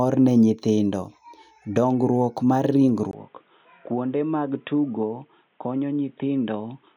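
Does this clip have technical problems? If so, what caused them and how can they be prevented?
Yes. At 3.11 s the input was likely switched to a poorer device: after a brief dropout of about 20 ms, the speech turns dull and boxy, with nothing above 3.8 kHz, drops a few decibels in level, and picks up a faint new background noise until the end. Locking the recording input to one fixed microphone and disabling automatic device switching would prevent this.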